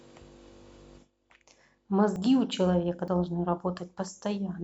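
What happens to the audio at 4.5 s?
Nothing goes wrong at 4.5 s; the audio there is intact, with no dropout, click, distortion or other fault.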